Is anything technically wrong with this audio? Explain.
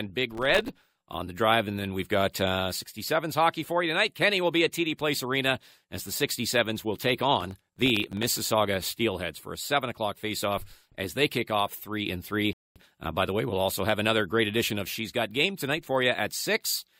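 Yes, there are two kinds of fault in this speech clip.

Processor overload crackle occurs from 0.35 to 0.94 s, ending just before "on the drive", and again from 7.41 to 8.23 s, just after "will take". The processor is failing to fill its audio buffers on time, and each missed buffer drops out as a brief hard-edged silence. The dropouts are short, consistent with buffers of around a millisecond and a half, with roughly thirty missed in each burst. They pile up into gritty crackling over the speech that clears once the load eases.

A rebuffering stall occurs at 12.53 s. The player ran out of downloaded audio and halted until more data arrived. The sound cuts to silence for about 0.23 s and then resumes from exactly where it stopped. No audio is lost, but the pause adds that time to the playback.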